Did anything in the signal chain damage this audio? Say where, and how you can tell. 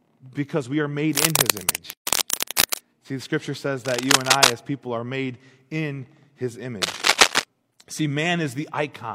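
Yes. In the analogue wiring, cable scratch noise sits a little above the speech from 1.09 to 2.80 s after "because we are", from 3.85 to 4.53 s, and from 6.82 to 7.44 s. The cause is likely a worn contact.

At the codec stage, a gap at a join of encoded pieces cuts a 136 ms gap at 1.93 to 2.07 s, left by untrimmed encoder delay and padding.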